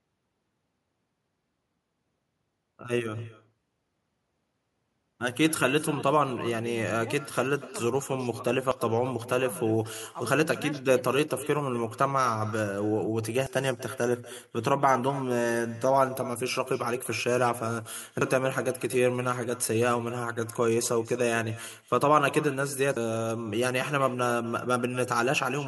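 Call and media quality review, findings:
Echo with no canceller, whole clip. Far end plays the call over a loudspeaker; its mic feeds it back with no echo cancellation in the path. Result: every phrase shadowed by a thinner copy about 17 dB down, arriving roughly a fifth of a second later. Round-trip delay is long enough to hear as a distinct repeat.

Audio missing between chunks at 8.71, 13.46, 18.21 and 22.96 s. Likely cause: a chunked recorder or processor dropping audio at each chunk handover, with segments of about 5 s. Symptom: roughly a third of a second cut out at each point, the two sides butted together with no silence.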